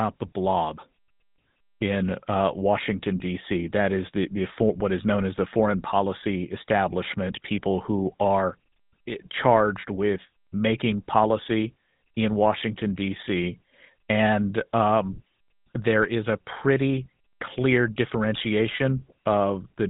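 From start to finish the speech has been through the GSM full-rate codec, and it's plainly audible: a buzzy, gravelly roughness from the pulse-driven excitation model, with nothing above about 3.8 kHz. That thin, coarse quality fits the 13 kbps full-rate mode.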